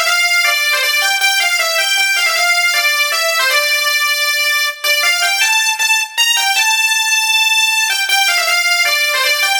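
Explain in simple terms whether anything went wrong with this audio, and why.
Nothing went wrong; no faults can be heard.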